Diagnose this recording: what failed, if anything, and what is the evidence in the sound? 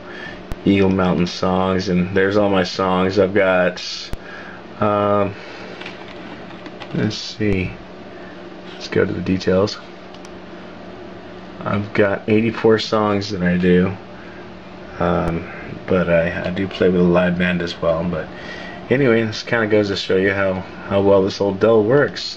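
Four low thumps interrupt the sound at 0.52, 4.13, 7.53 and 15.28 s, each leaving the audio beneath unchanged. These are DC steps of about −11 to −12 dBFS at the converter, where the zero line jumps and then decays through a 20 Hz high-pass.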